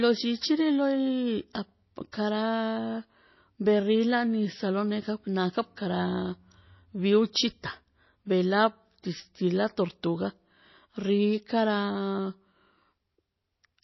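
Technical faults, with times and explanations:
Throughout: MP3 compression. The speech stops dead at 5.8 kHz and sounds watery and swirly, with smeared attacks, likely from an MP3 encoder short of bits, which fits roughly 24 kbps. A spectrogram shows a flat ceiling at 5.8 kHz above flickering, speckled gaps.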